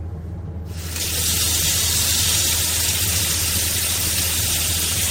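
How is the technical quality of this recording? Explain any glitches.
The technical quality of the recording is good, with no glitches to explain.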